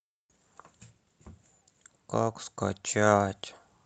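No faults found in this speech clip; the top end stops at about 8 kHz, consistent with a wideband call codec at a moderate bitrate, and that is normal for the call path.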